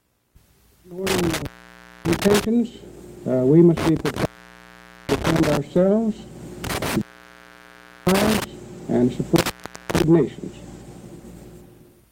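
The audio suffers from intermittent contact: a loose plug or cable connection opens briefly four times, at 1.07–2.45 s, 3.77–5.57 s, 6.64–8.44 s and 9.36–10.03 s, with the line fully open for about 0.59, 0.84, 1.06 and 0.40 s respectively. Each break begins and ends with crackle as the contact scrapes, and faint hiss remains between. That ragged crackle is what separates it from a digital dropout, which cuts to clean silence.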